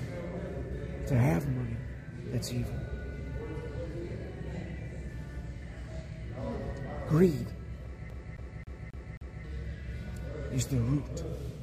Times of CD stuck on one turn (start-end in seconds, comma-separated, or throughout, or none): 8.10-9.44